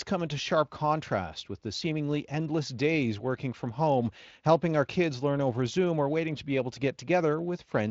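No faults found in this speech; it has gone through a Speex codec path whose content stops near 7.6 kHz, which fits a setting around 24 kbps.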